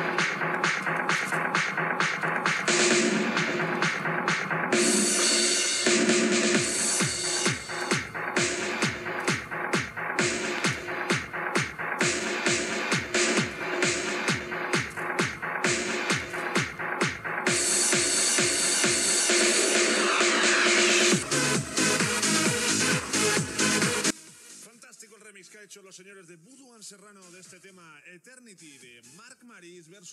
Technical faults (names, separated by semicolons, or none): one channel inverted